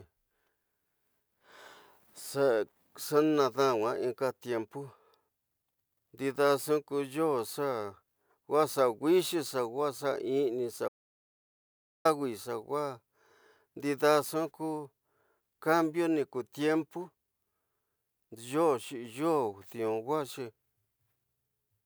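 An audio dropout to silence runs from 10.88 s to 12.05 s, removing about 1.17 s of the speech. The sound stops abruptly mid-flow and resumes just as suddenly, and the gap between is dead digital silence with no room tone or background left. That points to the input being lost while recording carried on writing silence, likely a momentary disconnection or mute somewhere in the chain, so whatever was spoken in that stretch is gone.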